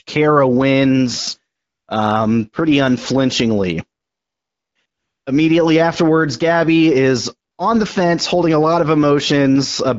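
AMR comfort noise appears at 1.55–1.87, 4.01–4.75, 4.85–5.25 and 7.51–7.57 s: speech frames stop, and a steady synthetic hiss switches in over the real background.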